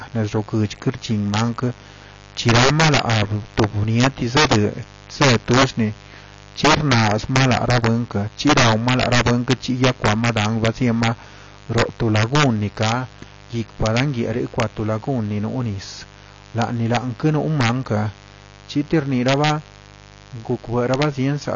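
A raspy mains buzz runs under the speech from the very start, about 25 dB below it. It is built on 50 Hz, with sharp switching spikes twice per cycle spreading harmonics up into the kilohertz range. That spiky edge separates it from plain hum, which would be a smooth, low drone.

Integer overflow also runs throughout. The level is pushed about 8 dB past the maximum, so on loud peaks the signal wraps to the opposite sign rather than being held at the limit. Roughly one percent of samples cross over, and each produces a violent crack. Ordinary clipping would sound like a flattened fuzz, not this sudden, harsh snapping.

The whole clip is also dull, with nothing above 7.5 kHz, and sustained vowels and sibilants carry a warbling, fizzy smear. That points to AAC compression as the likely cause, consistent with AAC-LC at a low bitrate around 24 kbps, where the coder cuts the top band and coarsely quantises what remains. 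A simple low-pass filter would dull the sound without adding that watery texture.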